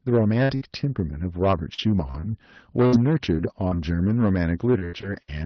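From start to finish the speech carries a harsh, gritty fuzz on every louder syllable. This is hard clipping: the signal was driven about 9 dB beyond what one stage could pass, so its peaks were sliced flat, catching a few percent of the samples. Those squared-off tops add harmonics high in the spectrum, which is why the crackle rides on each loud moment rather than on the quiet parts.

From 0.43 s to 5.30 s the sound turns choppy and metallic, with twelve short dropouts scattered across the span. The longest is 81 ms. This is repeated packet loss, with its robotic sound. Each time audio went missing, the receiver patched the hole by stretching out what it had just played, and the next hole arrived soon after. In all, roughly half a second was lost, and most of it was filled with that synthetic continuation. The rebuilt sections give the buzzy, robot-like quality. Through this, the call path's codec noise and its high-frequency limit near 6 kHz can be heard.

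Between 1.87 s and 2.54 s the speech suddenly drops in pitch by about a semitone (102 cents) and slows by 5.7%, then snaps back to normal. Pitch and speed move together, which points to a drift correction step, likely from clock-matching software that briefly changed the playback rate in one jump to rebalance its buffer before returning to the original rate.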